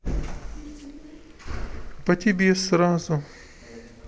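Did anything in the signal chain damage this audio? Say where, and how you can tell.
No, nothing in the signal chain damaged this recording.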